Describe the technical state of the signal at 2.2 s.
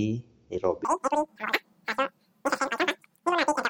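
At 2.2 s you're inside a wrong sample rate fault running from 0.85 s to the end. The speech plays about 2.76 times too fast and roughly 17.6 semitones high, which fits 16 kHz audio played back at 44.1 kHz with no conversion, so it sounds squeaky and rushed.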